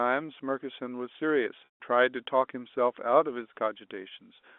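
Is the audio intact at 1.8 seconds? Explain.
No. Packet loss with pitch repetition runs from 1.65 to 1.80 s. The last pitch period repeats as a buzzy hold, then fades to silence over about 50 ms of the 150 ms gap. Unlike a plain dropout, the loss starts held rather than cutting abruptly.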